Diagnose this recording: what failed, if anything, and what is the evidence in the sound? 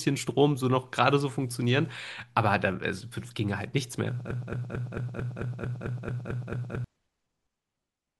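A broken-record loop runs from 4.31 to 6.84 s: the same 222 ms fragment of speech repeats back to back, eleven times, and the speech that belonged there is lost. Likely a stalled player or stream buffer re-sending its last block. A spectrogram shows identical tiles; the waveform, a regular repeating pattern.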